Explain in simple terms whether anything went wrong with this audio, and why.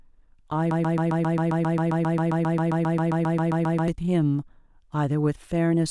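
Something did go wrong. From 0.71 s to 3.88 s the speech gets stuck in a broken-record loop. A tiny piece, about 0.13 s long, repeats 24 times in a row. The player or stream likely froze and replayed it, so the real speech there is lost.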